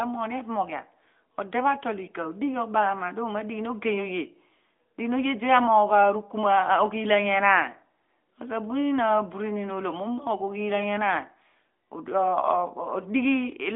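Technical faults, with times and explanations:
No technical faults are present; the speech carries the light, band-limited sound of a narrowband mobile link, held between about 250 Hz and 3.5 kHz, which fits a 12.2 kbps AMR-NB connection.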